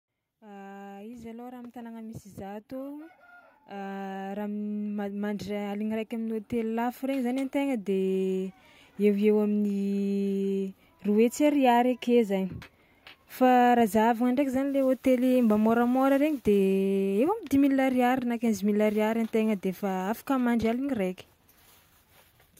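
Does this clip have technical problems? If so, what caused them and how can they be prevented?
Yes. Automatic gain rising from 0.26 to 8.57 s: the gain control, treating the input as too quiet, slowly lifts speech and background together by about 19 dB. Prevent it by disabling automatic gain and setting a fixed input level before recording.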